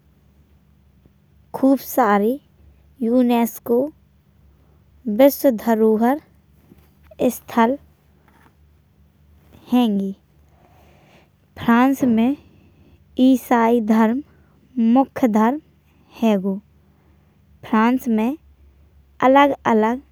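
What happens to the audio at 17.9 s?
Nothing goes wrong at 17.9 s; the speech carries on intact through that moment.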